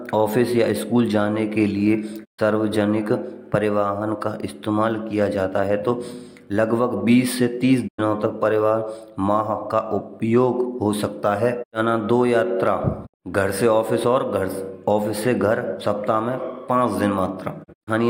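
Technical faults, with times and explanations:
2.24–2.40 s: digital broadcast dropout. The speech fades out over about 20 ms and falls silent for 128 ms. This fits four lost 32 ms frames muted by the receiver.
7.87–8.00 s: digital broadcast dropout. A 96 ms muted hole with a 20 ms fade, consistent with three corrupted frames; the speech sent during the gap is gone.
13.05–13.16 s: digital broadcast dropout. A shorter 64 ms silence after a quick 20 ms fade, pointing to two frames failing their checksum before reception recovered.
17.63–17.89 s: digital broadcast dropout. Several short holes, each at most 32 ms and 64 ms in total, are scattered over 224 ms as reception flickers between good and failed frames.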